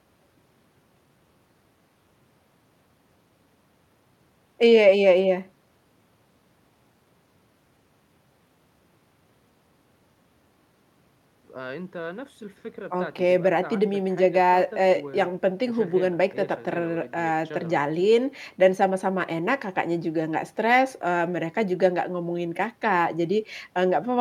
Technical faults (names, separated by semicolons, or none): none